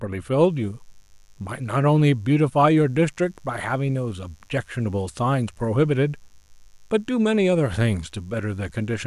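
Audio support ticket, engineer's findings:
Mains buzz, 0.43 s to end of speech clip. Steady raspy buzz, low, well under the speech. Probable source: dimmer, rectifier or unshielded cable coupling sharp switching spikes at 50 Hz, twice per cycle. Harmonics extend to several kHz, giving rasp rather than smooth low hum.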